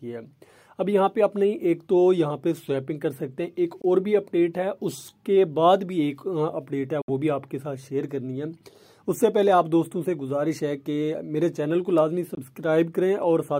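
Audio packets likely failed to reach the headphones in time over the wireless link, a Bluetooth dropout that leaves three silent holes: 3.82 to 3.85 s, 7.02 to 7.10 s, and 12.35 to 12.39 s. The first and last each lose about 21 ms, which fits a single dropped frame; the middle gap loses 64 ms, consistent with three. After each hole the sound picks up further along, as though it had kept playing unheard.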